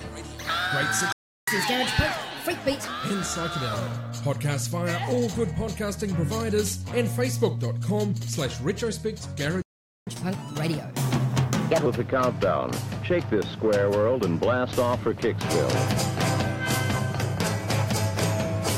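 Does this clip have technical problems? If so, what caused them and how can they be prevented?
Yes. There are two playback stalls, at 1.12 to 1.48 s and 9.62 to 10.07 s. The sound cuts to silence for about 0.35 s, then about 0.45 s. The likely cause is the player running dry of buffered data or its thread being blocked. A larger playback buffer would prevent this.

Each stall is followed by catch-up at higher speed, from 1.48 to 2.87 s and 10.07 to 11.86 s. The player resamples its backlog at 1.25 times normal speed. Pitch rises by about four semitones, then drops back. Pitch-preserving time-stretching would avoid the shift.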